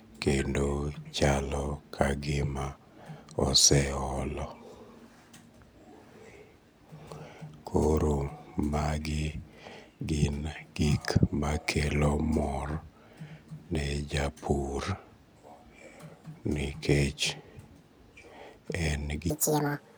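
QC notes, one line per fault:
19.30–19.98 s: audio read two samples at a time (double speed). For the last stretch of the speech, each pair of samples is taken as a single frame, so playback runs twice as fast and a full octave (12 semitones) higher.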